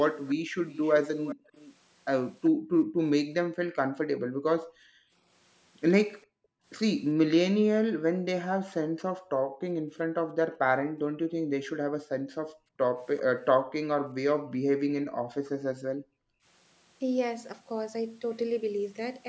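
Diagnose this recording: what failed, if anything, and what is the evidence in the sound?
A faint delayed copy of the speech trails it by about 382 ms from 0.13 to 2.5 s, well below the direct sound. This is likely an echo leak: the far end's echo canceller missed loudspeaker pickup during call processing.

The room background dips by up to about 40 dB at 0.37–1.45, 2.51–5.13, 6.26–6.65 and 7.81–16.45 s, which is background gated by the echo canceller clamping the microphone while the loudspeaker played.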